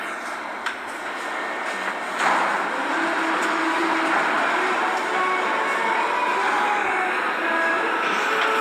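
Nothing stood out on listening to these everyday sounds.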